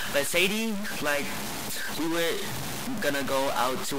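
From start to end, the speech carries a harsh, buzzy distortion. It sounds like a stuck bit. One bit of each sample likely stays fixed at 0 or 1, perhaps from a broken data line or converter. About half the samples then land off by that bit's weight, a step of about -30 dBFS. The error follows the waveform, so it grinds under every syllable. In the pauses, the bit flips as small values change sign, and they fill with a steady noise.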